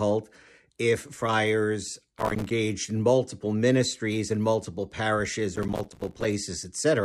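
Processor overload crackle hits at 2.18 to 2.51 s, after "if friars", and at 5.56 to 6.25 s, after "ministries and multiple parishes": missed few-millisecond buffers drop to silence, giving gritty tearing.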